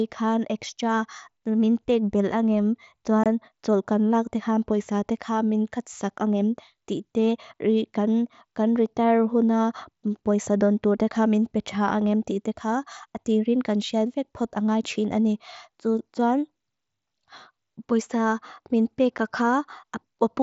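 Unconcealed Bluetooth headset packet loss hits this speech at 3.24–3.26 s and at 19.18 s, just after "poisa min". Voice packets between headset and phone were dropped and replaced by silence or an idle pattern, leaving abrupt gaps of 22.5 ms and 7.5 ms. Those lengths fit three lost frames and one lost frame, heard over the light grain of the wideband mSBC link.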